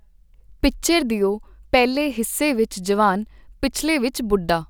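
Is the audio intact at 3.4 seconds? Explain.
Yes, the audio is intact at 3.4 s, with no dropout, click, distortion or other fault heard at that moment.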